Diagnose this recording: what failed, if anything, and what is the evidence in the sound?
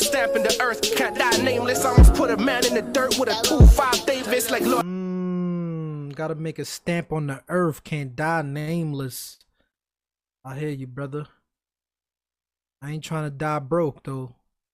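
The network delivered three packets late, emptying the jitter buffer: short stalls from a late packet at 8.59–8.70 s, 9.34–9.44 s and 9.71–9.77 s. The receiver held the last sound for 79, 64 and 27 ms, then resumed, so nothing is lost, only briefly frozen.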